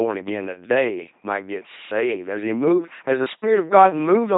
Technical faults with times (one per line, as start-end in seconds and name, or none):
0.00-4.37 LPC-10 vocoder